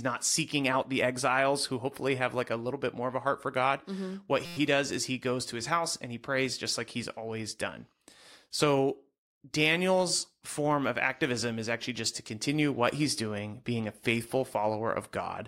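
At 4.45 s the playback system stalls in a system hang loop. The computer or driver briefly stops supplying new audio, so the sound hardware keeps replaying the same ring buffer, a 5.8 ms slice that fits a 256-sample buffer. That slice repeats 20 times until 4.57 s, and because it is so short, the speech gives way to a steady buzz at about 172 Hz. Once playback resumes, essentially no audio is missing.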